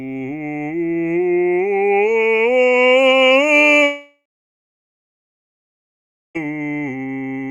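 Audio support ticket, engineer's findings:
Long network dropout in the music, 3.83 s to 6.37 s. The last sound continues as a fading buzz, then about 2.1 s of silence. Likely cause: incoming packets stalled and the receiver concealed the gap. Audio resumes with 2.5 s lost.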